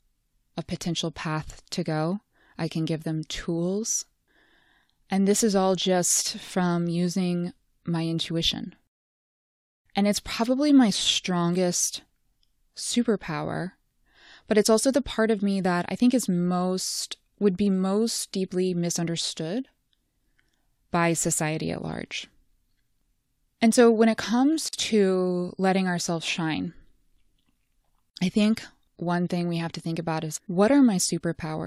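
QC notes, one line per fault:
24.69 to 24.73 s, gap at a join of encoded pieces: a 46 ms gap between "so when it comes" and "to letting ourselves shine", where separately encoded segments meet with their padding left in.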